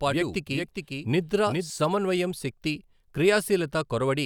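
Speech, with a doubled audio track from the start to 1.7 s: a dry copy trails roughly 400 ms behind, about 5 dB down, then stops abruptly, likely from a second, slower capture path.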